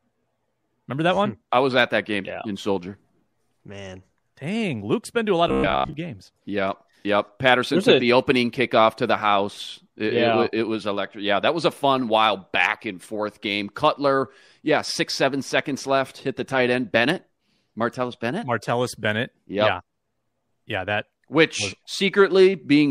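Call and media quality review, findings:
Robotic sound from repeated short buffers, 5.49–5.93 s: metallic buzz near 66.8 Hz, likely receive-side buffer underrun repeating roughly 15 ms chunks; spectrogram shows rigid evenly spaced harmonics, waveform roughly repeating cycles.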